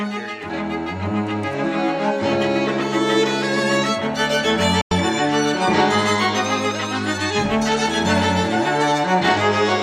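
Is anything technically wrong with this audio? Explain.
Yes. From 4.81 to 4.92 s there is a digital broadcast dropout. The receiver stopped getting valid frames and muted its output. The sound fades out within 3 ms and falls silent for 96 ms, which fits three lost frames. It then resumes, with that audio missing.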